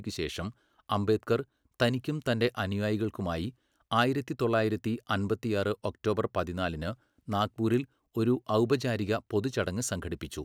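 No technical faults can be heard anywhere in the recording.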